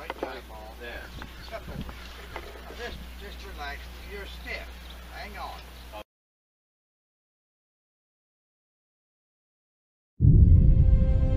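The signal holds steady throughout, with no dropouts, discontinuities or level disturbances to be heard at any point.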